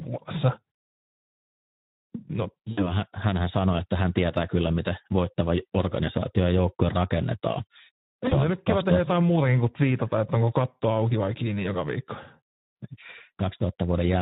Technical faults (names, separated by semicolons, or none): Speex codec; VoIP packet loss concealed by the speech codec